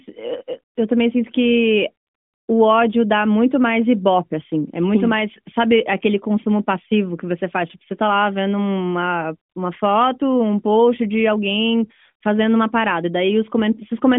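No technical faults turn up anywhere in the recording, which carries the 200 Hz to 3.5 kHz band of an AMR narrowband mobile link with nothing above 3.6 kHz, and its light coding texture fits the codec's top 12.2 kbps mode.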